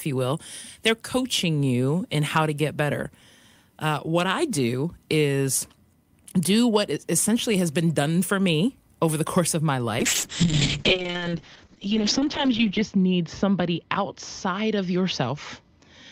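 At 10.01 s, just after "the course of my", a call bitrate drop cuts the encoder's budget from 48 to 7 kbps and narrows its bandwidth from 20 kHz to 8 kHz. The speech turns coarse and muffled, worst for 2.82 s, and stays degraded to the end.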